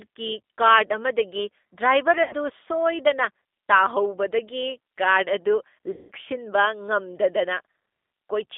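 G.729 codec coding runs throughout this speech, leaving it band-limited to roughly 250 Hz to 3.6 kHz and audibly rough and synthetic from 8 kbit/s pulse-based reconstruction. VoIP packet loss concealed by the speech codec occurs at 2.23–2.35 s and 5.91–6.11 s. About 80 ms and then 180 ms of audio are missing, and the decoder stretches its last pitch and filter into a fading buzzy tone or coloured noise that stays weak briefly after packets resume.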